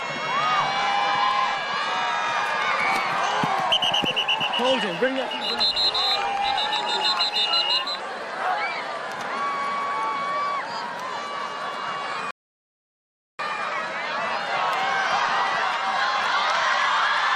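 At 12.31 s a rebuffering stall cuts the sound to silence until 13.39 s. Playback ran dry, then resumed exactly where it stopped, adding about 1.08 s.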